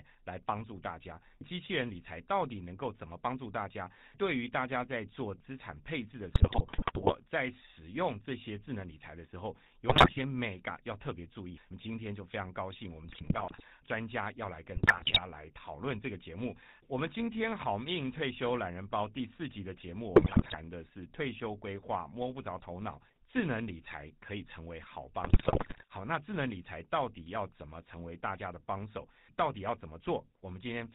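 GSM full-rate codec coding runs through the whole of this speech recording. Its bandwidth stops at 4 kHz, and a regular-pulse excitation that keeps only every third sample gives the voice a plainly audible buzzy, gravelly edge, which fits the 13 kbps full-rate coder. GSM bit errors break in at 6.34–7.15 s, 9.88–10.19 s, 13.04–13.63 s, 14.74–15.25 s, 20.16–20.55 s and 25.24–25.86 s. Corrupted filter, pitch and gain values reach the decoder there, so the speech turns into squawks, pops and gargling as the spectrum warps and the level jumps frame by frame.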